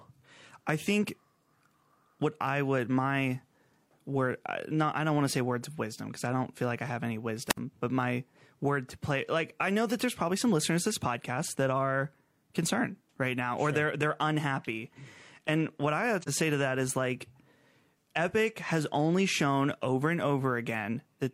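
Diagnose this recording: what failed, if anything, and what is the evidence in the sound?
Two separate faults here, at two different stages.

At 7.47 to 7.58 s the radio link drops out. That's a wireless microphone squelch dropout: the RF fades, hiss swells briefly, and the receiver's squelch mutes everything for about 62 ms before the speech comes back. It's an analogue transmission problem, upstream of any digital stage.

At 16.21 to 16.29 s there's a second hole, about 43 ms long, which fits a single lost codec frame. That's AAC frame loss with muting. The decoder zeroed the missing spectrum, and the overlapping transform windows fade the sound out and back in, so the gap has soft edges rather than an abrupt cut.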